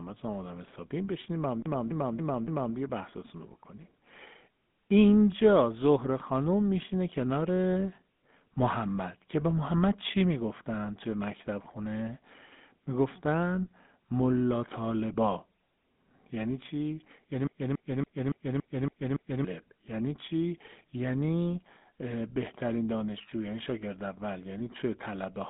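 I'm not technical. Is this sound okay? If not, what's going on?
No. From start to finish, the speech has been through the GSM full-rate codec, the compression used by early mobile phones. It rebuilds the speech from a rough model of how a mouth shapes sound, fed by a coarse stream of pulses, which makes it sound plainly buzzy and gravelly. The phone line also keeps only roughly 150 Hz to 3.6 kHz, and nothing at all comes through above 3.8 kHz, so the sound is thin and muffled.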